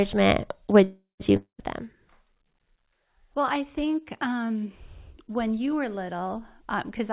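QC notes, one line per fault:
0.84–1.33 s, call audio freeze: The sound stops advancing and the last moment is stretched into a decaying buzz that thins out, with about 150 ms of near-silence before the sound resumes where it left off. This is likely a packet delay that drained the jitter buffer. The receiver filled roughly 355 ms with concealment, nothing was skipped, and everything after is about 355 ms later than before. The concealment has the narrow telephone-band colour of the G.711 mu-law path, with nothing above 4 kHz.
1.37–1.60 s, long network dropout: Almost immediately after the freeze, the sound cuts to a fading hiss of concealment that lasts around 217 ms, the last 110 ms or so being silence. When audio returns it has jumped ahead, and about 220 ms of the original is gone for good. This pattern is likely a run of lost packets rather than a delay.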